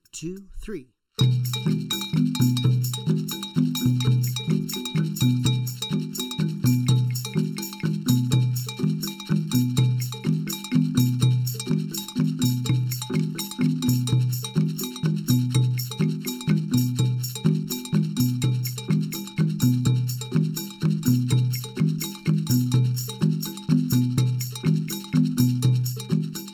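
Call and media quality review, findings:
Channel delay (comb filtering), whole clip: hollow, phasey tone with fixed spectral notches, the first near 700 Hz and then roughly every 1.4 kHz. Probable component: stereo-to-mono downmix, with one channel lagging under a millisecond so common content cancels.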